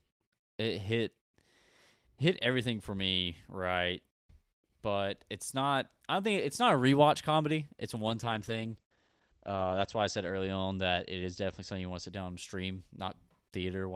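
Speech, with a call bitrate drop from 7.98 s to 12.17 s, ending just before "and stream". The sound turns rough and muffled. Highs above 8 kHz vanish, down from 20 kHz. It is worst for about 1.9 s. This fits the encoder falling from 32 kbps to 12 kbps.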